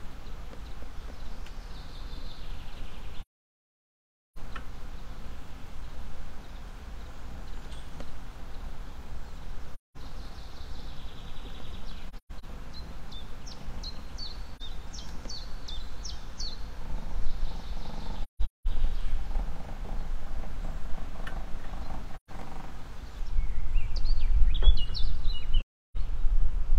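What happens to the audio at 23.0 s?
Nothing goes wrong at 23.0 s; the audio there is intact, with no dropout, click, distortion or other fault.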